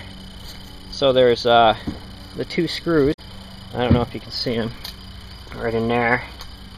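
At 3.10 to 3.19 s, damaged data in the compressed stream throws the decoder out of sync, producing a brief glitch and a ragged waveform break.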